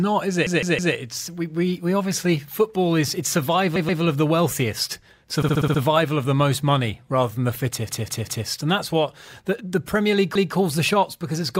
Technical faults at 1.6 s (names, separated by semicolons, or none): none